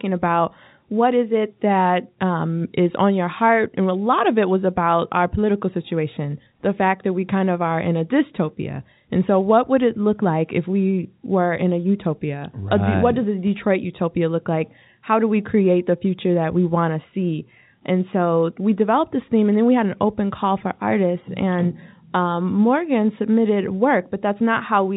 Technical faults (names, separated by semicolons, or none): none